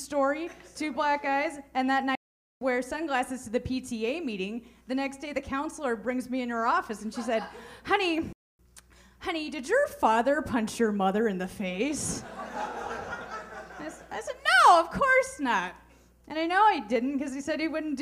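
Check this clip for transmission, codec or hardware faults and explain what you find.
Two playback stalls interrupt the audio. The first runs from 2.15 to 2.61 s, about 0.46 s, and the second from 8.33 to 8.59 s, about 0.26 s. Each time the sound cuts off mid-flow, goes completely silent, then resumes. The likely cause is the player running short of buffered data, or its output thread being blocked, so nothing reached the device until it recovered. On a waveform each stall is a flat line, and on a spectrogram it is a full-height blank band with abrupt edges.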